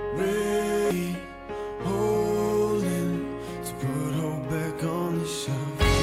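At about 0.91 s there's a spot of damaged data in the compressed stream. Some of the encoded bytes at that point were corrupted, so the decoder couldn't make sense of the frames there, lost its sync and had to hunt for the next valid frame header before it could carry on. What you get is a brief disturbance right at that moment, the sort of chirp, squawk, click or short hole that a decoder produces when it trips over bad frames.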